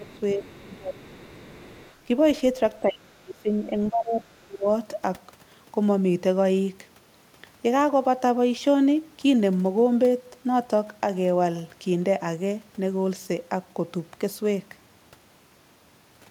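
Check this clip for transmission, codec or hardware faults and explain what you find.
Two faults show up in the first five seconds of this speech. Both point to echo cancellation struggling while both ends of the call talk at once.

Speech suppressed in double talk occurs at 0.0 to 0.18, 0.35 to 0.42, 0.58 to 1.28, 2.8 to 3.53 and 3.7 to 4.66 s. The talker's level dips, by about 5 dB at the mildest and about 30 dB in the last two stretches. The echo canceller likely mistook overlapping talk for echo and turned everything down.

The other side's voice leaks through at 0.09 to 0.2 s and again from 0.42 to 1.94 s. It is a faint second voice, about 25 to 30 dB below the talker. The canceller likely left part of the loudspeaker signal in the microphone path.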